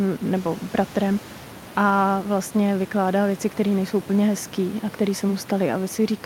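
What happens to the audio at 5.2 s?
At 5.2 s the speech carries on intact, with only the room's own background noise audible about 21 dB beneath it.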